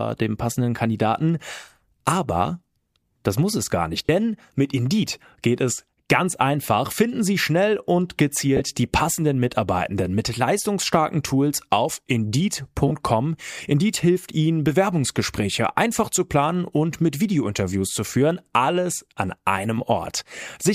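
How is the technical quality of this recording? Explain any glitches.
The recording has three short dropouts in an otherwise continuous speech track. They are lost LE Audio frames, heard at 4.06 to 4.09 s, 8.57 to 8.61 s and 12.88 to 12.92 s. Each gap lasts about 30 ms, which points to three consecutive 10 ms frames going missing over the Bluetooth link, likely carried by LC3 compression. When frames go missing, the LC3 decoder fills the gap by replaying the last good spectrum with randomised phase signs. Each loss is therefore heard as a brief noisy smear in the voice rather than a clean click or silence.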